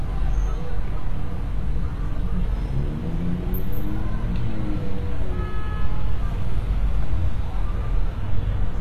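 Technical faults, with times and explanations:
Throughout, HE-AAC compression: the audio is plainly damaged, with treble that sounds bright but synthetic and grainy, likely from HE-AAC at a low rate, which fits roughly 24 kbps. The codec keeps only the lower spectrum and fills the top by copying lower bands upward, so upper harmonics no longer match what lies beneath. A spectrogram shows repeated, smeared patches above the crossover and a hard ceiling with nothing above 14.9 kHz.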